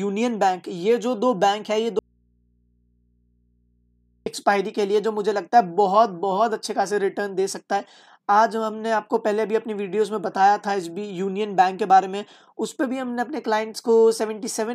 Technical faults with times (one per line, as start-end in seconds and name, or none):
1.99-4.26 audio dropout to a faint residue